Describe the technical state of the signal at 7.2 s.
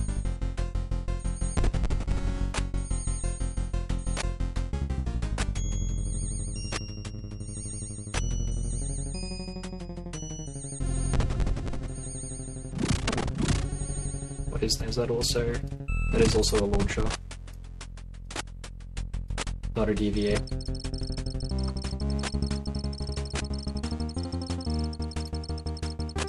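At 7.18 s, compressed frames are skipped. About three frames, roughly 70 ms of audio, never play, so the sound jumps ahead. The jump fits a frame length near 23.2 ms.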